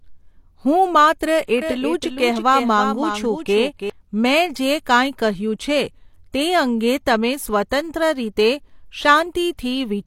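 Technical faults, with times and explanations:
1.47 s pre-echo: just after "હું માત્ર", a burst of hiss about 14 ms long comes right before a sharp attack, which sounds smeared. A transform codec spread noise sized for the loud onset across its whole block, so unlike a click, the noise leads the attack.
1.62 to 3.90 s doubled audio track: after "હું માત્ર", a full-band copy of the speech trails roughly 300 ms behind, about 5 dB quieter, and starts and stops abruptly. This is likely a second, slower capture path mixed in. Unlike reverb or a room echo, the copy has no decay or room colour.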